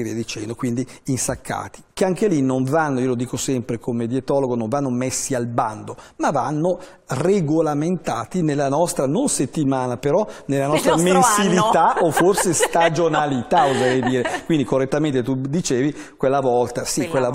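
No technical faults are audible anywhere in the audio.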